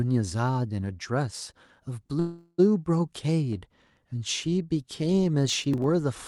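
At 2.19 s the speech stops and a fading buzzy tone carries on from the last sound. It lasts to 2.60 s, about 388 ms of filler, ending in a brief silence of roughly 20 ms. This is a call audio freeze. The jitter buffer likely ran dry while packets were held up in transit. When they arrived, the speech resumed where it broke off. Nothing was lost, but everything after runs about 388 ms late.

From 5.50 s to 5.84 s a gritty crackle tears across the speech. This is processor overload crackle. The processor missed its deadline on around ten small buffers, each well under a millisecond long. Each late buffer was skipped. That left a tiny hard-edged gap. The gaps came close together, so they merge into a rough burst. The crackle stops once the load eases.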